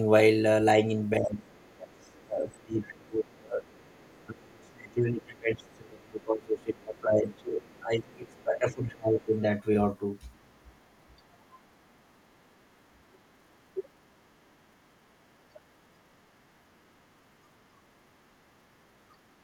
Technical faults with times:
0.74-3.64 speech suppressed in double talk
1.50-4.70 other side's voice leaking through
4.27-9.52 speech suppressed in double talk
5.63-6.63 other side's voice leaking through
7.33-8.36 other side's voice leaking through
10.33-10.57 other side's voice leaking through

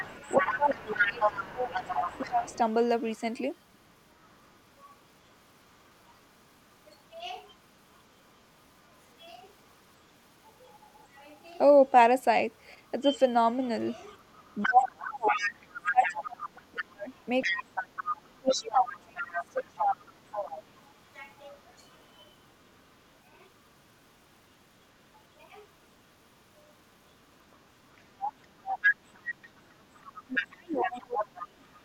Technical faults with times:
0.00-4.49 other side's voice leaking through
0.40-2.49 speech suppressed in double talk
13.14-22.79 other side's voice leaking through
14.63-20.04 speech suppressed in double talk
27.51-31.81 other side's voice leaking through
30.12-31.63 speech suppressed in double talk

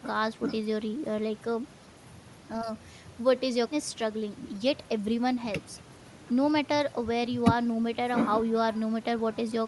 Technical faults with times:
0.00-9.68 Bluetooth LC3 compression

